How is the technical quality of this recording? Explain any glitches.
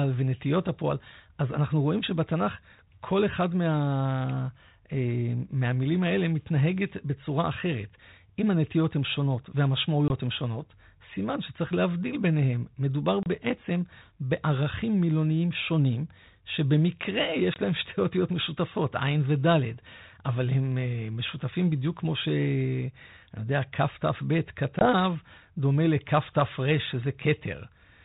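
It's a phone-band recording carrying light G.726 ADPCM coding at 32 kbit/s, with four short dropouts. Packet loss on an ADPCM call hits at 10.08–10.11, 13.23–13.27, 17.54–17.57 and 24.79–24.88 s. Each time a couple of packets' worth of audio, roughly 20 to 30 ms, goes missing and becomes hard-edged silence. The decoder's adaptive predictor and step size then drift from the sender's, so the speech comes back slightly distorted before resettling.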